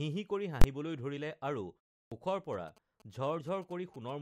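At 0.62 s, invalid numbers at full scale pin the output to one extreme value for about 23 ms, which fits a 1024-sample block. It is heard as a sharp bang and shows as a flat block at one extreme in the waveform. At 2.04 s, a clipped start after a pause cuts off the first 76 ms of speech after a 0.32 s silence while the device wakes. The waveform jumps from flat straight into speech with no onset. From 2.53 to 4.10 s, GSM signalling bursts from a nearby phone add a galloping dit-dit-dit of short 217 Hz buzzes well below the speech. On a spectrogram they appear as groups of vertical stripes with harmonic lines.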